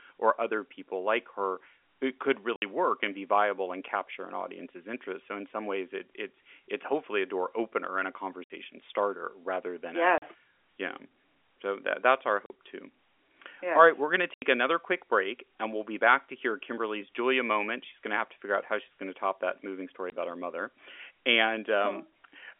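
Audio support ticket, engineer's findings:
Packet loss filled with silence: dead gaps at 2.56–2.62, 8.44–8.50 (between "door opener and a" and "starter rather than"), 10.18–10.22, 12.46–12.50 (after "that that's our"), 14.34–14.42 and 20.10–20.12 s (between "top that moving story" and "about her mother"). Gap lengths of 20, 40, 60 and 80 ms fit 20 ms packets. Hard edges and silence distinguish it from concealment, which would repeat or smear the sound. The G.711 telephone band can still be heard around the holes.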